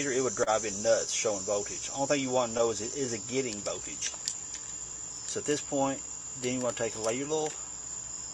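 There's clock drift between sender and receiver: the sending end runs roughly 2% slow, so the receiver's buffer keeps draining and has to be topped up all the way through. You hear that as repeated timing corrections from 1.74 s to 8.30 s, where small pieces get repeated to play at about 98% speed, adding something like a tenth of a second overall. There are also two short stalls from a late packet, at 0.43 to 0.50 s and 2.57 to 2.62 s. The last sound gets held for 31 ms and then 16 ms before things carry on, with nothing actually lost, just a brief smeared hang.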